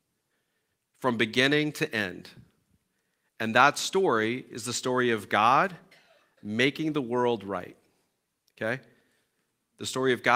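Nothing goes wrong anywhere in this speech recording, so there's no fault to point out at any moment.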